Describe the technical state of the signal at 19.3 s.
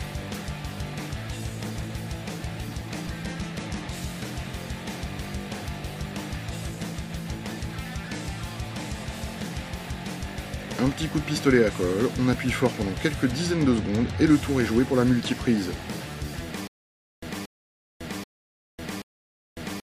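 At 19.3 s the signal is in a stutter with silent gaps, running from 16.67 s to the end. A 230 ms fragment repeats every 782 ms with 551 ms of digital silence between, likely from a stalled stream replaying its last buffer.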